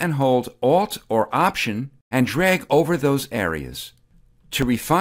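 From 0.86 s to 4.62 s there's a regular tick in the sound, a click landing every 1.25 s like clockwork. That steady spacing points to clock drift buffer slips. The likely cause is two devices each running on their own clock, off from each other by something around 500 ppm. The buffer between them creeps toward empty or full until a few dozen samples get dropped or repeated, and each jump shows up as one of those clicks.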